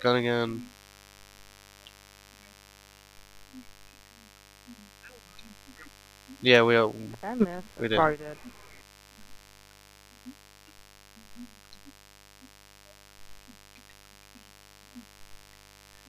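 A steady, raspy mains buzz runs throughout, built on 50 Hz harmonics from switching spikes twice per cycle, sitting roughly 30 dB below the signal.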